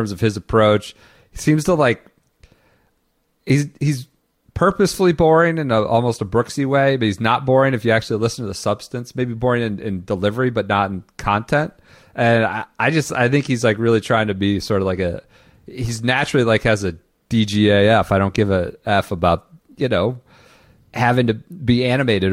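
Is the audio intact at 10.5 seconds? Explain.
Yes, at 10.5 seconds the speech runs through intact, with no dropout, click, distortion or other fault to be heard at that point.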